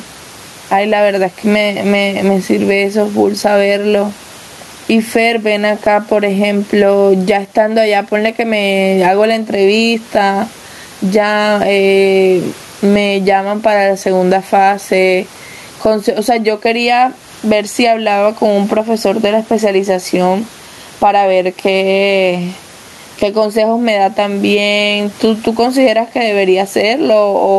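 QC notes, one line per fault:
throughout, gain pumping: input gain likely far too high, so a fast limiter clamps loud peaks; gain swings about 15 dB, squashing loud and soft parts closer in level.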